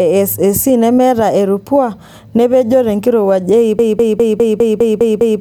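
At 3.79 s the speech locks into a broken-record loop: a fragment of about 0.2 s repeats exactly, back to back, eight times until the clip ends. The stream likely stalled and kept resending its last buffer. Unlike an echo, nothing decays, and the rest of the speech is lost.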